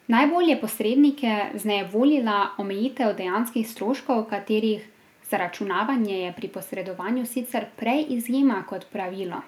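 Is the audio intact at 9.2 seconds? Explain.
Yes, the audio is intact at 9.2 seconds, with no fault audible at that moment.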